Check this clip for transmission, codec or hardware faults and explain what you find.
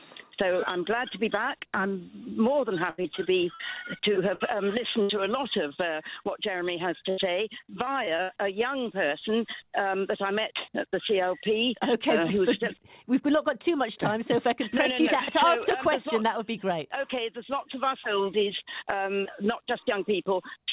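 Packet loss occurs in three forms, over a call path whose sound stops at 4 kHz, which fits G.711 mu-law at 64 kbps.

A burst of packet loss occurs at 2.9–3.01 s, 3.54–3.61 s, 4.34–4.42 s and 5.02–5.21 s. Each time, about 60 to 80 ms never arrived. The receiver stretched the last sound into a fading held tone or hiss, then jumped ahead. That skip is what separates these bursts from the briefer patches.

Short concealed packet loss is heard at 3.02–3.06 s and 5.68–5.72 s. Only about 20 ms was lost each time, and the gap was bridged by extending the preceding sound and blending back in. The result is a quick smear or wobble rather than an audible dropout.

Repeated packet loss (robotic sound) runs from 7.1 to 8.3 s. Seven holes, the longest about 73 ms, were patched one after another, covering about 18% of that stretch. The concealment never settles, so the sound turns choppy with pieces missing instead of showing one isolated gap.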